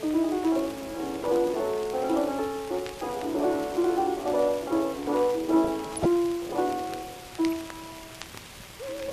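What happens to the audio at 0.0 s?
From 0.0 s onward the whole clip sounds dull and gurgly, likely MP2 compression switching off upper sub-bands at a low bitrate around 80 kbps.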